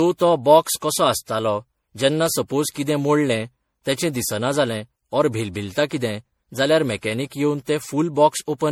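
Throughout the speech there is generation loss, likely from repeated MP3 encoding at 64 kbit/s, about five passes. Each pass requantises on a shifted frame grid, so swirl, hollowness and blurred attacks pile up beyond what one encode would cause, while the bandwidth still reaches 20.6 kHz.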